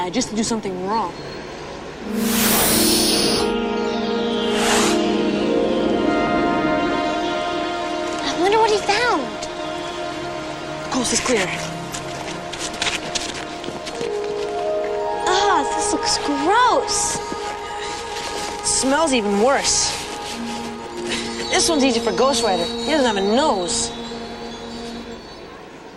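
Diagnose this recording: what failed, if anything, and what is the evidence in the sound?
A skip ahead occurs at 6.27 s, at the network and jitter-buffer stage. Roughly a fifth of a second of sound is missing, and the two sides are butted together with no fill or gap. The discarded stretch sets playback correspondingly earlier.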